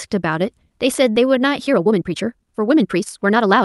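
At 1.11 to 1.18 s there is short concealed packet loss: roughly 40 ms of the call arrived too late for the decoder, which extrapolated the preceding sound to cover the gap before crossfading back, leaving a brief smear where a short consonant can disappear. From 1.63 s to the end, the pace jumps to about 1.48 times faster at unchanged pitch, likely a time-stretched section in which short pieces were dropped to shorten it, so the speech sounds rushed. Both faults sit on a call-codec path whose band tops out near 12 kHz.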